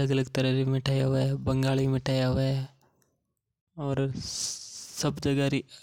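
No technical faults heard anywhere in the speech recording.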